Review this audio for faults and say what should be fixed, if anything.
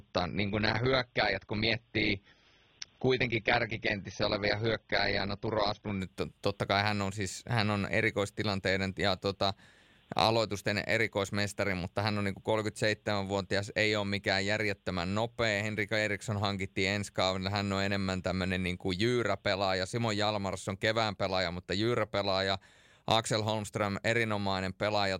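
From 0.0 to 6.0 s the speech has nothing above 6.3 kHz and heavier coding artefacts, then sharpens abruptly with no gap. This is an adaptive stream starting at a low bitrate, which fits a 24 kbit/s AAC rendition stepping up to about 96 kbit/s once throughput was measured. Unlike a rebuffer or stream switch after a stall, the audio never pauses. Unlike a fixed low-pass filter, the dullness disappears after the step. To prevent it, start playback on a higher rendition or seed the bandwidth estimate from the previous session.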